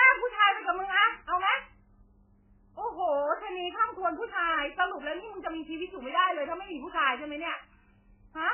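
MP3 compression damage runs through the whole speech clip. The treble is cut off entirely, with nothing above 3 kHz, and the heavy swirling, watery texture fits a very low bitrate of around 8 kbps. At so few bits the encoder likely chopped off everything above a fixed cut-off and zeroed the weaker frequency lines. Those lines flicker in and out from frame to frame, giving the warbling smear on s sounds and blurred onsets.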